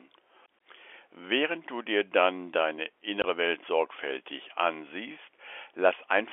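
Packet loss filled with silence occurs at 3.22 to 3.24 s, right after "du dir dann deine". A 20 ms stretch, which points to a single lost packet, was replaced by silence, leaving a brief hole with hard edges in the narrow telephone-band G.711 sound.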